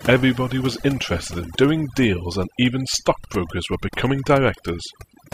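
Overdone noise removal runs through the whole of this speech recording. A noise reduction stage has been pushed too hard, so any frequency band that sits near its idea of the background noise is pulled far down or cut outright, and the softer parts of the voice are caught along with the noise. The gaps fall to near silence scattered with twinkling specks.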